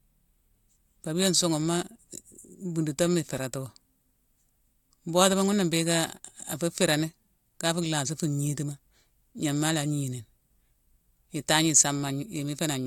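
No technical faults can be heard anywhere in the recording.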